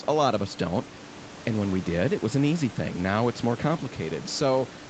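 No technical faults can be heard in this speech. It has the narrowed sound of call microphone processing, with nothing above 8 kHz, and room noise sits about 19 dB below the speech.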